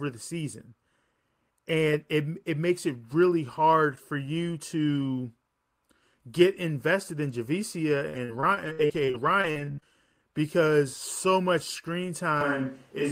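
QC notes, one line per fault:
8.09–9.84 s, repeated packet loss (robotic sound): speech turns choppy, with pieces dropping out just before "because so much". Thirteen gaps, the longest 64 ms, were each patched by stretching the previous sound, so about a quarter of the stretch is concealed rather than real.
12.41 s to the end, switch to a distant microphone: the voice abruptly turns roomy and hollow, thinner in the bass, with room noise about 35 dB below the speech while overall level stays about the same. Likely the close microphone dropped out, leaving a farther pickup.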